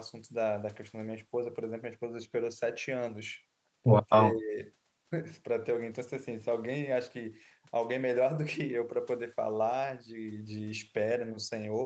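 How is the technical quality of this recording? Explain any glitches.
The recording has one glitch, a brief loss of level in the speech, heard over a call channel that carries nothing above 8 kHz, which fits an Opus call at a wideband setting.

From 4.05 to 4.6 s, speech is suppressed in double talk. The echo canceller likely mistook overlapping far-end sound for echo and turned down the near-end path. The speech dips by as much as about 20 dB and thins out in patches across roughly 0.4 s of that span.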